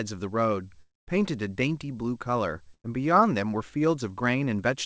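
From 0.82 to 1.21 s the sound smears into a fading buzz or hiss, then about 0.2 s of silence before resuming. A long network dropout is the likely cause, with about 260 ms lost.

At 2.74 to 2.86 s a short held buzz or hiss fades and the sound jumps ahead: a burst of packet loss removed about 100 ms, which the receiver covered over.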